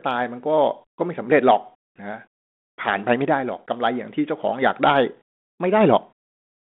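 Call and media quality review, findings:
No faults found in the speech audio. G.726 ADPCM path at 32 kbit/s working normally: audible band limited to 200 Hz to 3.5 kHz, with light coding damage consistent with that rate.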